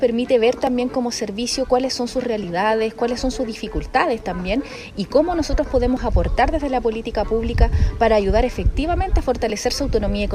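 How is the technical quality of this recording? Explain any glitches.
Technical quality suffers from clock drift buffer slips: mismatched device clocks likely force small sample blocks to drop or repeat, causing clicks every 1.76 s from 0.67 to 9.50 s.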